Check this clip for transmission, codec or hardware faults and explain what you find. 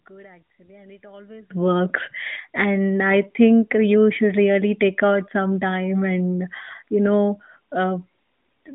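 Two faults turn up, both early, on top of a narrowband mobile line that only passes roughly 150 Hz to 3.7 kHz, light coding damage in keeping with AMR-NB's top 12.2 kbps mode.

From the very start to about 1.5 s, the speech drops by about 27 dB and goes faint, then snaps back to full level. That's the classic sign of one channel inverted. When a stereo pair with one leg's polarity flipped is summed to mono, everything common to both sides cancels, and centred speech is almost entirely common, so it nearly disappears. The likely cause is a reversed wire or a polarity flip somewhere upstream of the mono fold-down.

Then at about 2.34 to 2.38 s there's a brief dip or warble in the speech, caused by lost AMR speech frames. One 20 ms frame failed its check over the radio link, so the decoder filled the gap by reusing the previous frame's pitch and vocal-tract settings at reduced gain. With a single frame gone it doesn't fade all the way out, and you get a short smeared blip before the speech picks up again.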